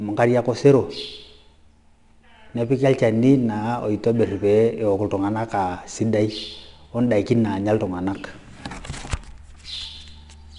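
Gritty hiss clings to every louder stretch of the speech throughout, tracking its level, with nothing above 10.7 kHz. That is 4-bit ADPCM compression, plainly audible: each sample becomes a coarse step from a prediction, and the error follows the signal, fitting roughly 89 kbps.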